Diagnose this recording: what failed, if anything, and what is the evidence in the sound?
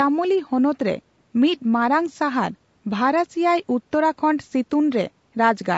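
Low-delay AAC compression, throughout the clip: the speech is plainly rough and grainy, with noise filling the gaps between harmonics. This is likely AAC-ELD at a rate that fits about 32 kbps. Its short frames resolve pitch harmonics poorly and leave too few bits.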